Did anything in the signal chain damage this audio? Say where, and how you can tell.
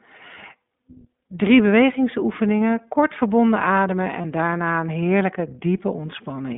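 Yes. iLBC codec damage, present throughout: the speech is band-limited to roughly 200 Hz to 3.6 kHz and sounds rough and synthetic, consistent with iLBC's 20 ms frame mode.

Lost iLBC frames, 4.22 to 4.26 s: a network stage dropped a packet. The decoder filled it with a brief buzzy held-vowel repeat, which fits a single lost 20 ms frame, and then recovered immediately.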